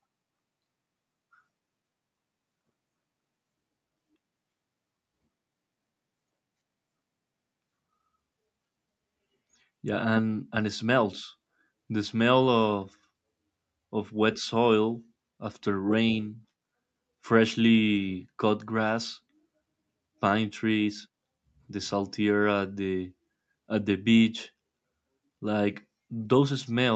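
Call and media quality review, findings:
No faults found in this speech recording.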